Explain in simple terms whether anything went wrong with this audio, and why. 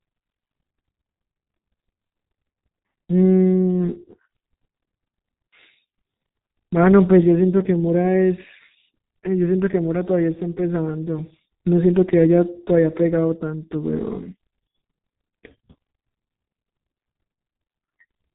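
Heavy G.723.1 codec damage runs through the whole recording. The speech sounds muffled above 3.8 kHz, and it also sounds hoarse with smeared consonants, which a simple treble cut wouldn't cause.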